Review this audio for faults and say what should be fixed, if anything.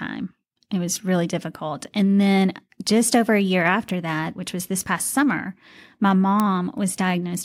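A bit error spike occurs four times: single bits flipped in stored or transmitted samples, each corrupting one sample before the value snaps back. At 0.96 s and 4.62 s the spikes reach about -15 dBFS, at 3.89 s about -9 dBFS, and at 6.40 s about -3 dBFS. Each is heard as an isolated, broadband tick cutting through the speech, with no relation to what is being said. The loudest is at 6.40 s. Protecting the storage and transfer path with error detection and correction, such as checksummed links and ECC memory, would prevent these flips.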